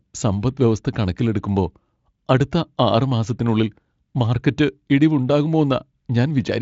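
Nothing is technically wrong with this speech recording; it has passed through a Speex encoder at a high setting, and its content stops near 7.6 kHz.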